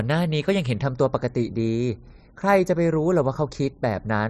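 Speech. From 0.83 s to the end, channel delay causes comb filtering. One channel lags by well under a millisecond, so mono summing notches near 3 kHz, sounding hollow.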